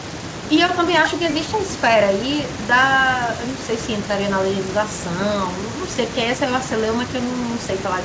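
Nothing goes wrong technically in this speech; it has the top end of an ordinary wideband call, with nothing above 8 kHz, which fits a G.722 link running at 64 kbps.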